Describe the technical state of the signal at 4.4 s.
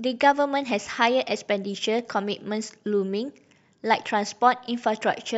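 At 4.4 s the speech signal is intact, with no audible fault at that moment.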